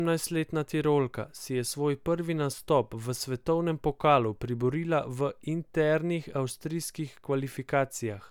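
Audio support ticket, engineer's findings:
Listened to the speech clip in full and heard nothing wrong with the audio, so there's nothing to chase on this ticket.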